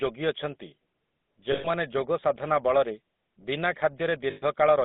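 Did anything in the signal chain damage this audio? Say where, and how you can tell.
Yes. The damage sits at the codec stage. A GSM full-rate codec has processed the whole speech clip, with plainly audible damage. The voice has a buzzy, gravelly texture. The band runs only from about 200 Hz to 3.7 kHz, so there is no air on top. The codec models the vocal tract and drives it with a coarse pulse excitation, discarding fine detail. That roughness fits a 13 kbps full-rate stream.

There are lost GSM frames from the network or radio link at two points. The first runs from 1.52 to 1.68 s, just before "ଯୋଗସାଧନା ବଳରେ ବିନା". The second runs from 4.30 to 4.43 s. Each gap lasts 120 ms, which fits six 20 ms frames. In both, the sound freezes into a rough, metallic ring. The decoder repeats the last good frame's settings instead of playing the missing audio.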